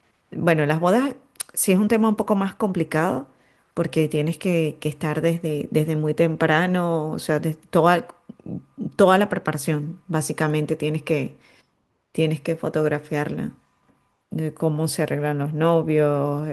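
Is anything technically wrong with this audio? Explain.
No, nothing technically wrong can be heard in this speech recording; the signal holds steady throughout without any audible defect.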